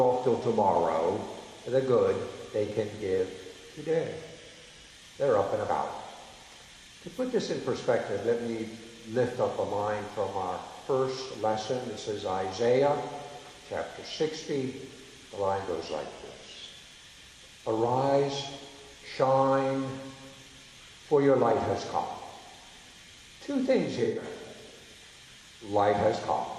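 At 2.65 s and again from 24.04 to 24.23 s the audio shows AAC frame loss with concealment: the decoder rebuilds missing spans from the last good spectrum, leaving a smeared, noisy patch of about 43 ms (fitting one frame) and then 128 ms (fitting three frames).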